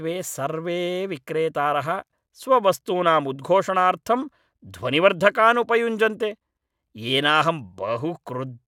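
No technical faults are audible.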